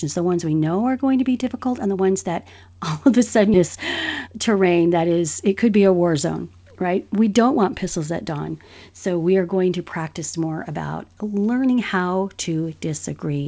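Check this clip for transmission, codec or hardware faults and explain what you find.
Two faults show up in this speech clip.

At 3.54 s, right after "all of a sudden", there is a skip ahead. Roughly 0.4 s of audio was dropped while later audio was already queued. Playback jumps forward with no gap filling it. The two sides join almost directly, so the speech lurches.

From 4.26 s to 5.72 s, ending just before "be a war zone", there is a jitter buffer speed-up. The buffer held too much audio. The receiver trimmed many short pitch-period pieces, roughly a fifth of a second in all. Speech runs about 12% fast at unchanged pitch and sounds hurried.

The call path's codec, which fits G.722, leaves nothing above 8 kHz.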